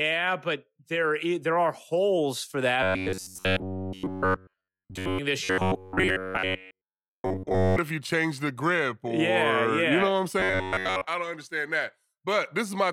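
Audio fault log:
2.83–5.19 s, 5.44–7.78 s and 10.40–11.07 s, robotic sound from repeated short buffers: the speech becomes a rigid metallic buzz locked at 93.8 Hz that still roughly tracks the words. In the first two spans all of the sound is repeated, and in the last span most of it is. This is likely caused by starved audio delivery, where the player loops a segment of about 10.7 ms and skips the real audio. Unlike a dropout, the sound never goes silent.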